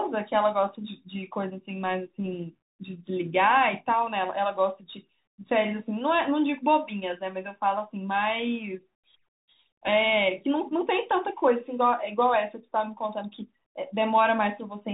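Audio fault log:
throughout Bluetooth CVSD headset codec. The speech has nothing above 4 kHz. Its one-bit up-down coding, which fits 64 kbps, makes s sounds scratchy and leaves a granular hiss.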